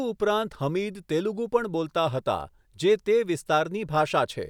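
No technical faults can be heard anywhere in the speech.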